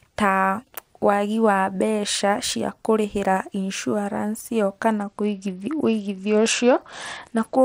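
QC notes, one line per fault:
4.98 to 7.65 s: Bluetooth SBC bit pool drop. Speech loses treble and turns gritty. This fits a bit pool cut from 31 to 10, starving upper sub-bands.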